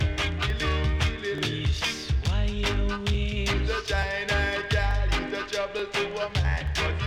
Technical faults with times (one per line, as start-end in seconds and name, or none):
0.50-6.67 clock drift buffer slips